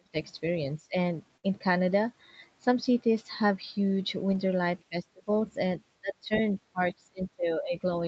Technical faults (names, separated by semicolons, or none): speech suppressed in double talk; burst of packet loss; lost packet rebuilt from error correction